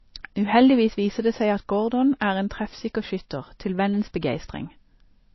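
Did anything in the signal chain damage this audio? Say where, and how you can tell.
Yes, at the codec stage. Across the whole speech clip, nothing is present above 5.8 kHz. The top end stops at a hard wall, and the sibilants sound dull. This is low-bitrate audio saved at a high bitrate. The file was most likely squeezed by a very low-rate MP3 encode, around 24 kbit/s, and then re-saved as a larger MP3. The second pass kept the first pass's cut-off and artefacts. It could not bring back the missing detail.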